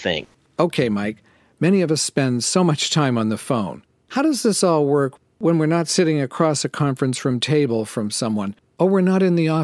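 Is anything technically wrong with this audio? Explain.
No technical faults are audible.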